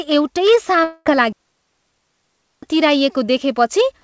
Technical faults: long network dropout; digital wireless dropout

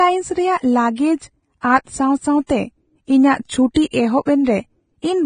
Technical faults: Vorbis compression

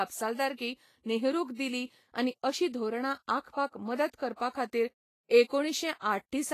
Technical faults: Vorbis compression

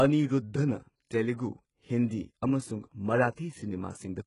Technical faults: HE-AAC compression

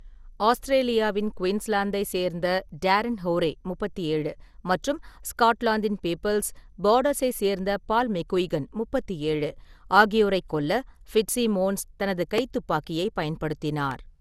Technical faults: generation loss

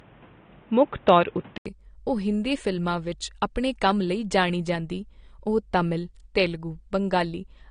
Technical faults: low-bitrate audio saved at a high bitrate; input switched to a poorer device

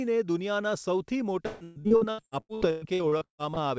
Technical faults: repeated packet loss (robotic sound)

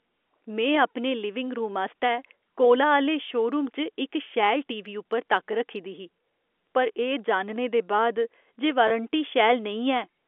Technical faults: packet loss with pitch repetition

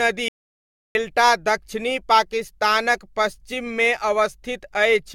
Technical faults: generation loss; audio dropout to silence

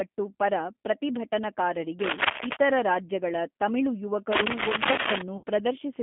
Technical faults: G.729 codec; cable scratch noise; VoIP packet loss concealed by the speech codec

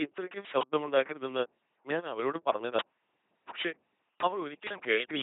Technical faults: LPC-10 vocoder; uninitialised buffer

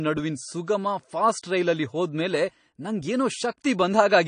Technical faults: AAC compression

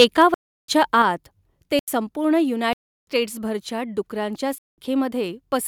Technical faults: microphone overload; block of digital silence; microphone volume stepped down

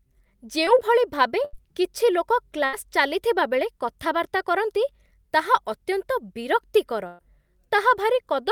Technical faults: short concealed packet loss; burst of packet loss

